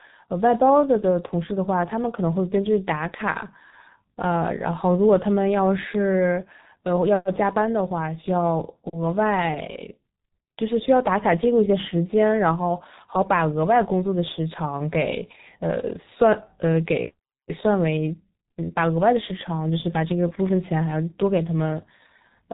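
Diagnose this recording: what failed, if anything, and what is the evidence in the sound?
Codec stage: heavy G.723.1 codec damage throughout. Nothing above 3.8 kHz survives, and consonants blur hoarsely. This fits a roughly 6 kbit/s stream.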